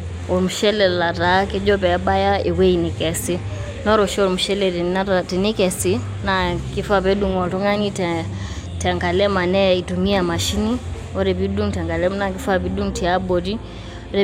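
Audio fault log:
Nothing in the speech stood out as faulty on listening.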